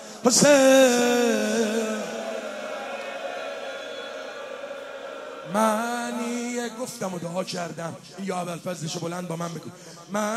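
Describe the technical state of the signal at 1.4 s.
At 1.38 to 1.41 s there is a repeated-frames fault. A 24 ms block of compressed audio is played twice in a row, which points to a single frame written or sent a second time, so the decoder repeats it. The result is a brief stutter: the same sliver of sound returns immediately. The audio runs 24 ms longer as a result.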